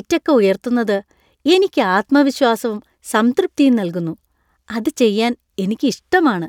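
Listening to the recording, nothing stood out as a technical problem at any point.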